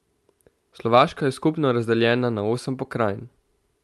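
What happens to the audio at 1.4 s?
Nothing goes wrong at 1.4 s: the speech passes through intact, carrying only the ordinary coding character of the call path it travelled through.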